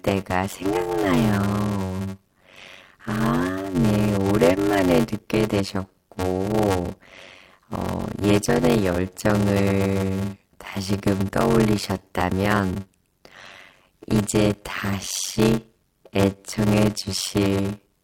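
From start to end, one stage writes shorter blocks than the next reads, and zeros pad each remainder: a block size mismatch (padded). A buzz near 93.8 Hz runs under the speech, which plays at 0.625 times normal speed with timbre unchanged, fitting 512-sample reads.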